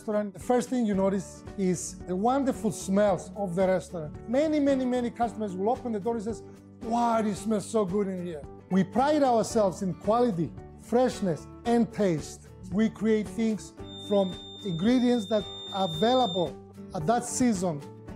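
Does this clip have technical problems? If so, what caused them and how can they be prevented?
Yes. A feedback whistle sits behind the sound from 13.80 to 16.52 s. It is a thin, steady tone near 3.6 kHz, roughly 15 dB below the signal, swelling and fading slowly. The likely cause is a loudspeaker-to-microphone loop held just at the edge of feedback. Lowering monitor gain or moving the microphone away from the loudspeaker prevents it.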